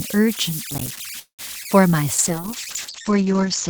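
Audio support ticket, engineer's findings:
Converter idle tones, whole clip: whistle near 2 kHz plus grainy floor, about 13 dB below the speech, heard in pauses. Delta-sigma converter running without dither, locking into repeating bit patterns on small input. A steady pitched tone, not broadband hiss, so not a noise-floor problem.

Processor overload crackle, 0.71–0.99 s: burst of gritty tearing riding on the speech. Audio processing thread missing deadlines on roughly 5 ms buffers, about fifteen missed, each miss dropping a hard-edged silent gap. Many tiny repeated dropouts that stop when the load passes, unlike a single freeze.

Call audio freeze, 1.19–1.41 s: last sound stretched into a fading buzz, then about 110 ms of silence, and the speech resumes where it stopped with nothing lost. Likely jitter buffer underrun from delayed packets. Playout now runs about 194 ms later. One long insertion, not crackle and not a dropout.

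Short concealed packet loss, 1.63–1.67 s: brief smear or wobble. About 20 ms of speech never arrived and was patched with roughly 18 ms of synthesized continuation, then blended back. Sound is actually missing here, unlike the freeze, and the event is a single short patch rather than the rapid repeated gaps of the crackle.

Call bitrate drop, 2.15 s to end: speech turns rough, watery and muffled. Bandwidth estimate fell and the Opus encoder went from 64 to 8 kbps, with the lowest rate held for about 1.3 s. Audio bandwidth narrowed from 20 kHz to 8 kHz. Sustained dullness and coarseness rather than gaps, which separates it from loss or freeze.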